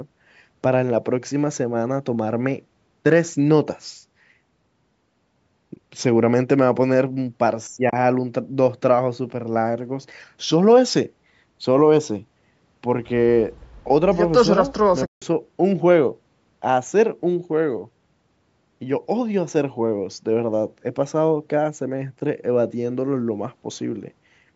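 Speech, with AAC frame loss with muting in three places: a 10 ms dropout at 5.76 s, 30 ms from 7.90 to 7.93 s, and 160 ms from 15.06 to 15.22 s. Missing frames are decoded as silence, and the overlapping windows fade the sound out and back in, leaving soft-edged holes. The gap lengths fit 10 ms frames, likely from the low-delay AAC-ELD codec carrying this call.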